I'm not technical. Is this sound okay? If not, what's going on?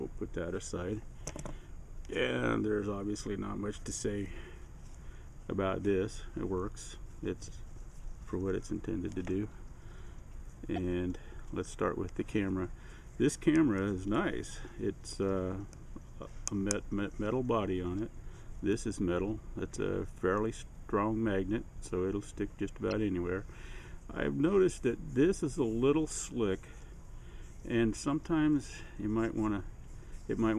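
No. There are two brief glitches, at 10.76 to 10.78 seconds and at 22.91 seconds, heard as a chirp, click or tiny gap. This is damaged data in a compressed stream: some of the file's stored data was corrupted, so the player briefly lost its place.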